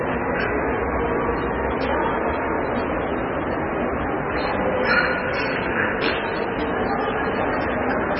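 From start to finish the sound is dull and watery, with a swirling, bubbling texture in which quieter detail flickers in and out. Nothing is present above 5.5 kHz, so the top end is simply missing. The likely cause is heavy MP3 compression at a very low bitrate, around 16 kbps. Starved of bits, the encoder chopped off the treble at a fixed frequency and kept discarding weaker frequency components, which then switch on and off from frame to frame.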